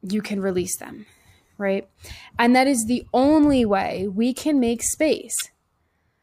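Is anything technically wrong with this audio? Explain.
Yes. Just after "way we can make", from 5.37 to 5.42 s, there is damaged data in a compressed stream. Corrupted bytes leave the decoder misreading frames and hunting for the next header, producing a brief chirp, squawk, click or short hole.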